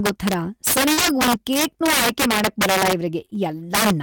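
Throughout the speech, an integer overflow cracks the loudest peaks. The signal was driven about 12 dB past the integer limit, and instead of being held there, a small share of the samples wrap to the opposite extreme. That produces violent snaps, far harsher than the flattened buzz of ordinary clipping.

At 0.93 to 0.99 s, a short concealed packet loss leaves a 40 ms hole. The decoder bridges it by extending the preceding sound and then crossfading back, so the gap becomes a brief smear or wobble rather than silence or a click. Anything short inside that stretch can disappear.

Overlapping it, from 0.97 to 1.11 s, is a lost packet rebuilt from error correction. About 80 ms, which points to four packets, play from low-bitrate backup copies carried in the following packets. Unlike the concealment, nothing is guessed from earlier sound, but the rebuilt stretch sounds grainier.

Right after "ಆಯ್ಕೆ ಮಾಡಕ್ಬರಲ್ಲ", at 3.21 to 3.23 s, a single 20 ms frame is likewise restored from its backup copy, a brief rough patch. 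Two back-to-back concealed losses follow, at 3.25 to 3.30 s and 3.30 to 3.33 s. Each has a 20 ms gap papered over with extrapolated sound, heard as a small smear.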